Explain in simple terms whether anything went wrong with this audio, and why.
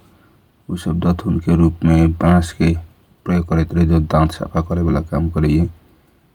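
Nothing went wrong here that I can hear; the speech sounds steady and intact the whole way, with no glitches, gaps or odd sounds to point to.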